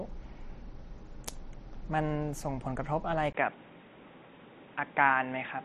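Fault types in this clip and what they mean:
Input switched to a poorer device: after a 20 ms gap at 3.33 s, speech loses all above 3.8 kHz and picks up new noise, likely a device change, not filtering.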